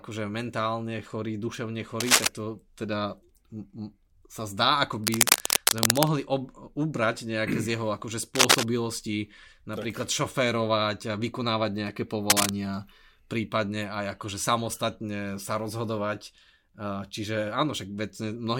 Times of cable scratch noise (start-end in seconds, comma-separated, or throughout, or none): 2.00-2.27, 5.04-6.08, 8.35-8.65, 12.29-12.51